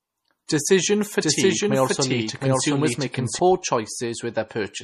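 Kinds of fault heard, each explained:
Low-bitrate audio saved at a high bitrate, throughout: nothing above 13.7 kHz remains, likely from an earlier low-bitrate MP3 whose losses the higher-rate re-save cannot restore.
Doubled audio track, 1.21 to 3.39 s: a second full-band copy at roughly equal level trails by about 0.7 s, starting and stopping abruptly, likely from two out-of-step copies mixed together.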